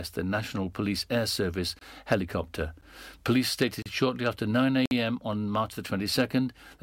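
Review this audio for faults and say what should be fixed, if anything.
Four gaps between stream segments cut into the speech: 1.79–1.81 s, 2.81 s, 3.82–3.86 s just before "shortly after", and 4.86–4.91 s. Each is a hard-edged silence of 13 to 55 ms. They recur about once a second, at segment boundaries. Timestamps leave holes, and the player fills them with silence. Nothing is lost. Make each segment's timestamps start exactly where the previous segment ends.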